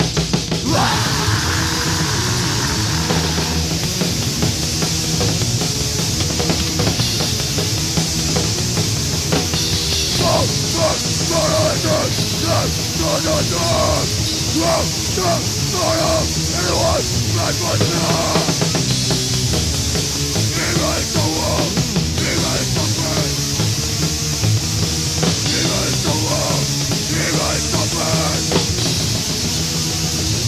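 No technical faults can be heard anywhere in this audio. There are no events to mark at any point along its timeline.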